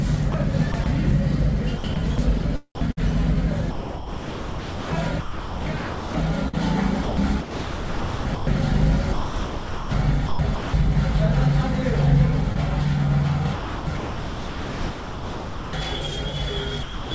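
From 0.32 to 0.86 s the sound turns choppy, with about 60 ms swapped for a thin, steady hiss. The same chopping returns over longer stretches. From 1.78 to 8.47 s roughly 3.4 s is lost to noise, from 9.13 to 10.89 s about 1.1 s, and from 13.55 to 15.73 s about 2.1 s. This is sound chopped by the voice detector. The sender's activity detector likely kept mistaking quieter passages for background, so the receiver played comfort noise in those gaps.

At 12.52 to 12.57 s there is a brief smear where the audio is stretched over a hole. This is short concealed packet loss. About 20 ms never arrived in time, and the receiver covered it with about 28 ms of extrapolated sound before blending back into the real signal.

From 16.83 to 17.11 s the sound gives way entirely to steady noise for 280 ms. This is sound dropped by the voice detector. The detector likely judged the closing sound to be background and stopped sending, so comfort noise replaced it. 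Throughout, nothing is heard above 8 kHz, which fits a G.722 call path running at 64 kbps.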